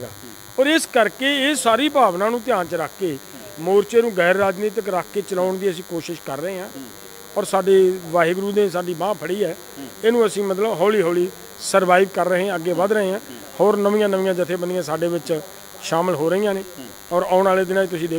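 From the very start and running the whole way through, there's a DECT cordless phone buzz sitting under the sound. Some DECT handset or base station close by is firing its radio bursts 100 times a second, and the audio circuitry is rectifying them into the signal. What you get is a thin, steady 100 Hz buzz stacked with harmonics, so it comes across raspy rather than hummy. It sits roughly 20 dB below the main signal.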